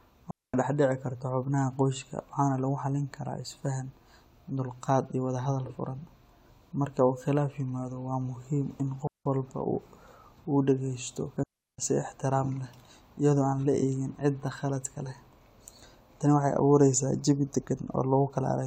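At 0.31 s the speech drops into a clean hole of about 230 ms, then again at 9.07 s, just after "waa muhiim in", for about 180 ms, and at 11.43 s for about 350 ms before "si ixtiraam leh iyadoo". Each is a digital wireless dropout: the receiver lost too much data and muted with a very fast fade. Unlike an analogue radio dropout, there is no hiss or crackle around these gaps, only near silence.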